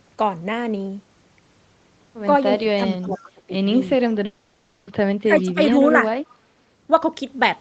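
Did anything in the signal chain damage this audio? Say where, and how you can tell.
Yes. From 2.58 to 3.53 s, and again from 5.24 to 5.77 s, the speech sinks sharply, by about 20 dB and then about 15 dB, for roughly half a second and a third of a second overall. This is speech suppressed in double talk at the call-processing stage. The echo canceller likely could not separate the talker from returning echo while both sides spoke, so it turned everything down.

From 3.12 to 3.22 s a faint duplicate of the speech trails the original by 379 ms, about 35 dB below it. This is an echo leak, also at the call-processing stage. The far end's canceller likely left some loudspeaker pickup in its microphone signal and sent it back.

From 4.25 to 4.89 s the speech gives way to a smeared, buzzy continuation that fades out. It then resumes further along with that stretch gone. This is a long network dropout. 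About 620 ms of audio likely never arrived, and the receiver's concealment filled the whole gap.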